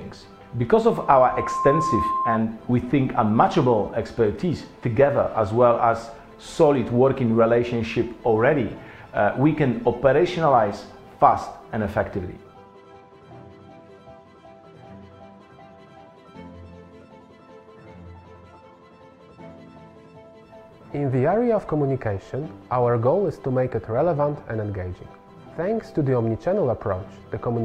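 Loudspeaker feedback squeal from 0.91 to 2.39 s: the microphone re-captures its own loudspeaker, and a 1 kHz tone swells over roughly 0.7 s to about the programme level.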